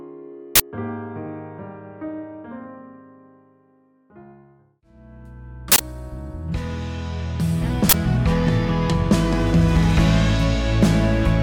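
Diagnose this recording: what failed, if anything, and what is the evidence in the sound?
The playback buffer stage failed: three uninitialised buffers. You get short, loud bursts of digital noise at 0.56–0.60 s, 5.72–5.80 s and 7.89–7.94 s. The buffer went out before any audio was written, so leftover memory played as samples. The 43 and 85 ms lengths fit 2048- and 4096-sample blocks.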